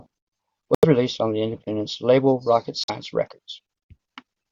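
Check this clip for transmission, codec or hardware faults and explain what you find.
Two brief dropouts interrupt the speech, and both sound like a Bluetooth stall. The first runs from 0.75 to 0.85 s, with about 84 ms of silence just before "released on the independent". The second runs from 2.84 to 2.90 s, with about 49 ms of silence. Each time the sound cuts cleanly to nothing and then resumes. This is likely interference delaying radio packets, so the headphone buffer emptied and playback waited for the resent data.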